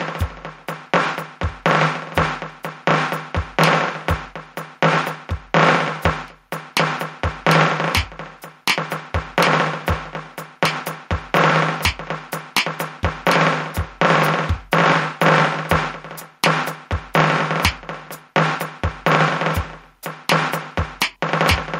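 Gain pumping runs through the whole music clip, from start to finish. The level breathes audibly: each loud passage pushes the overall sound down, a swing of around 5 dB. This is likely a fast limiter or compressor clamping down on input whose gain was set far too high, so loud and soft moments sit squashed closer together than they should.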